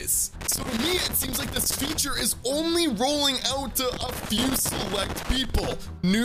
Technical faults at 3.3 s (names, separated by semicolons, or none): none